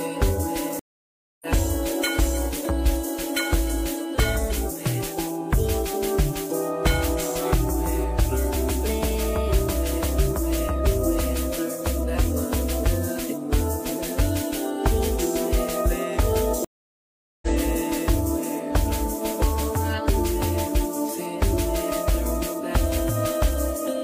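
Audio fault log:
0.79–1.46 s and 16.65–17.48 s, stream reconnect: the sound drops to silence for about 0.62 s and then 0.78 s as the connection breaks and the player rejoins with a new decoder, so each restart opens softly over its first frame. Unlike a plain dropout, the audio does not continue from where it stopped but jumps ahead, by roughly 0.7 s the first time and about a second the second time, skipping material as a live stream would.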